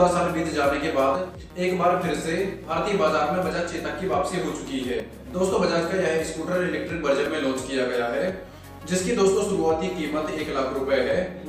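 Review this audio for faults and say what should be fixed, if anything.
Abrupt jumps in the sound occur at 2.64, 5.0 and 7.26 s, with the skip at 5.0 s longer than the other two. This is likely a dropped buffer (overrun): incoming samples were overwritten before being read, and the two sides were butted together. The waveform shows a sharp step with no gap, and the spectrogram a thin broadband vertical line.

To prevent it, enlarge the capture buffer or give the reading thread higher priority so samples are collected in time.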